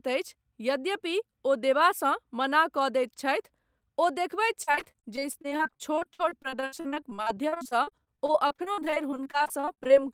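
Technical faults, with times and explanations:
4.63–10.02 s, repeated packet loss (robotic sound): dozens of dropouts up to 60 ms, each patched by stretching the preceding sound, leaving choppy speech with pieces missing.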